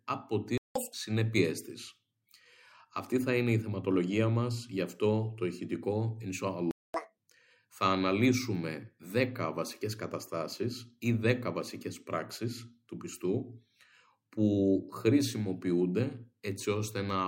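At 0.58 s the audio cuts to silence for about 0.18 s, and again at 6.71 s for about 0.23 s. These are playback stalls, likely the player starving for data. Each shows as a flat, empty gap in the waveform and a blank vertical band across the spectrogram.

Each stall is followed by catch-up at higher speed, from 0.75 to 0.93 s and from 6.94 to 7.17 s. The backlog plays at double speed, so pitch jumps up by nearly an octave and then drops back. On the spectrogram the harmonics shift upward and sit wider apart for that stretch.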